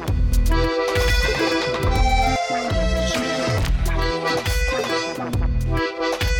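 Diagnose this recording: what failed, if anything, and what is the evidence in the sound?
Doubled audio track, 0.32 to 2.36 s: an equally loud copy trails about 150 ms behind, likely from a slower second capture path in the driver. Waveform transients repeat undecayed, with abrupt edges.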